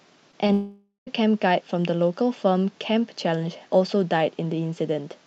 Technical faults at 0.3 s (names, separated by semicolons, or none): short concealed packet loss